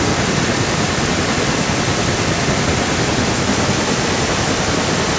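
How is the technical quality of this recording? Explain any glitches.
The recording carries a clear echo throughout, over call-band audio with nothing above 8 kHz. An echo leak runs from 0.0 to 5.18 s. The speech repeats 168 ms later, only slightly quieter. A loudspeaker's echo canceller likely missed it.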